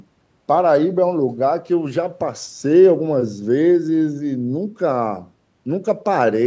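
Nothing stood out on listening to this speech, which carries the usual sound of call microphone processing with no content above 8 kHz.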